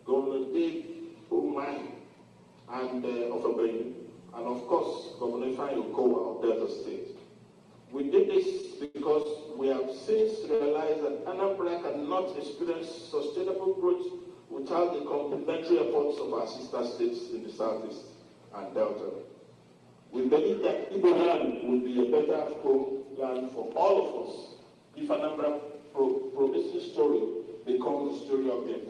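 Between 8.61 and 10.62 s the sound briefly hangs and drags four times, at 8.61–8.65, 8.85–8.97, 9.23–9.27 and 10.55–10.62 s. These are short stalls from a late packet. Each time the jitter buffer ran empty, so the receiver stretched the last sound for 15 to 96 ms and then resumed without losing anything. Later, from 13.79 to 14.36 s and again from 25.27 to 25.80 s, the audio briefly sounds hurried while keeping the same pitch. This is jitter buffer speed-up: the receiver trimmed about 50 ms of excess buffered audio each time, running 7% and then 9% fast.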